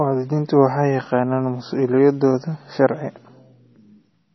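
From start to finish, the speech has nothing above 5.9 kHz. The treble stops abruptly there. Weak detail flickers in and out between frames, giving a watery, swirly texture. S sounds chirp metallically. This is likely heavy MP3 compression, fitting a bitrate near 24 kbps.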